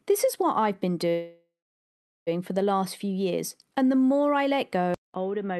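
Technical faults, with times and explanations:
1.09–2.29 s, call audio freeze: after "is what I've been" the sound hangs, fading to near-silence, then resumes at "for the last few", likely packets stalling the jitter buffer.
4.94–5.59 s, input switched to a poorer device: after "more I let go", a 0.2 s gap, then duller, quieter audio cut off above 3.8 kHz, likely a switch to a weaker mic.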